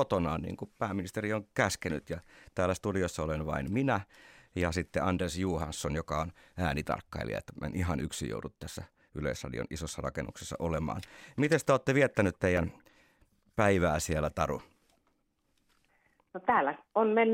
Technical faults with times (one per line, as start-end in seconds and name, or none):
11.95-12.88 CD scratch ticks